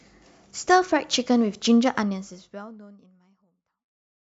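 Nothing stood out on listening to this speech; the level simply fades out smoothly from around 2 seconds to the end.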